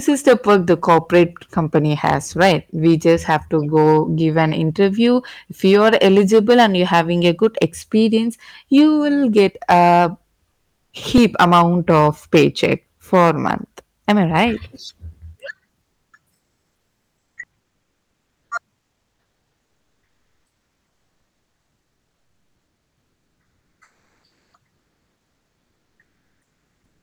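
Hard clipping runs through the whole speech clip. The signal is driven about 11 dB past what one stage can pass, so the loudest peaks are sliced flat. Only a small share of samples is cut, but each flat top adds high harmonics. The result is a crackle and a harsh edge on the loud syllables, from start to finish.

From 10.51 to 10.91 s, right after "you will get a", the background changes. This is comfort noise in place of the background. The real room sound drops out and a smooth, steady hiss takes over, about 7 dB quieter. The likely cause is discontinuous transmission: the sender stopped sending during a pause, and the receiver filled the gap with synthetic noise.

At 11.18 s, just before "amount of paycheck for", there is a repeated buffer. A 1.45 ms slice plays two extra times. That length fits a 64-sample buffer. New audio arrived late, so the device replayed the last block. The repeats are so short that they sound like a brief click or buzz rather than a stutter.

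The same comfort noise returns from 15.81 to 16.13 s, about 8 dB down. Another repeated buffer follows at 16.87 s, with one extra play, heard as a small click. Then the synthetic background fills three more stretches. The first runs from 17.61 to 18.51 s and drops about 14 dB. The second runs from 18.79 to 24.53 s and is about 10 dB lower. The third runs from 24.75 s to the end, about 9 dB down. Each sounds flat and featureless.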